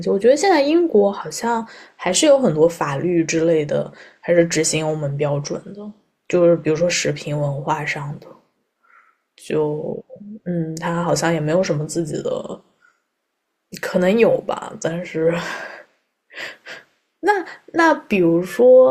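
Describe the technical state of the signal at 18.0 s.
At 18.0 s the signal is intact, with no audible fault at that moment.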